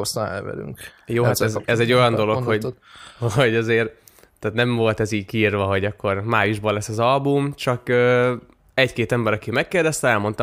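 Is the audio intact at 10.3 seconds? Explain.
Yes, the audio is intact at 10.3 seconds, with no dropout, click or other technical fault at that point.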